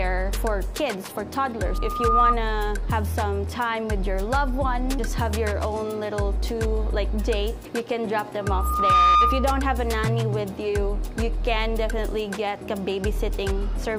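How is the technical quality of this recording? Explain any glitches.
The recording is marred by two bursts of loudspeaker feedback squeal, at 1.64–2.37 s and 8.40–9.62 s. A loop from speaker to microphone runs away at 1.2 kHz and swells over roughly half a second to well above the sound. That gradual swell sets it apart from an interfering tone, which would start at full level.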